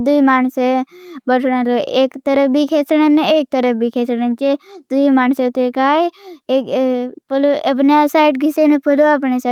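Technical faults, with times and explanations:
throughout: clock drift between sender and receiver. The speech runs at an unsteady, slightly dragging pace with small hiccups recurring at uneven intervals. The sender's clock runs about 3 percent slow, so the receiver's jitter buffer keeps draining and must be padded.
0.34 to 9.47 s: repeated timing corrections. Faint stutters and stretched moments keep appearing, playing the stretch at 97% speed. To stay in step with the slow sender, the receiver repeatedly repeats short pieces, adding roughly 0.3 seconds overall, always lengthening.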